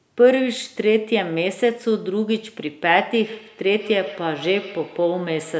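From 3.25 s to the end of the speech at 5.59 s there is feedback echo between two devices. A second device in the same room is playing this talker's audio back into the microphone, and the local echo canceller cannot remove sound that its own device did not play. Each syllable returns roughly every 150 ms, thinner and ringing, peaking at about 18 dB below the speech. The call's microphone processing passes nothing above 8 kHz.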